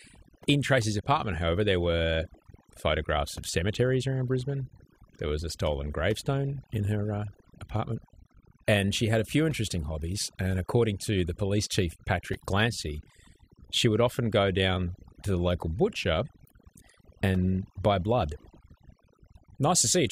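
Speech with overdone noise removal throughout. Aggressive noise reduction pulls bands near the noise floor down, leaving near-silent gaps with twinkling specks.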